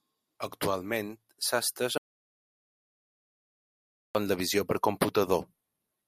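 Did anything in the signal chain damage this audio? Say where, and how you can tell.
Yes. An audio dropout to silence runs from 1.98 s to 4.15 s in this speech. The audio stops mid-flow and returns mid-flow, and the 2.17 s gap is silent with no room tone. The likely cause is lost input upstream of the recorder, which kept writing silence.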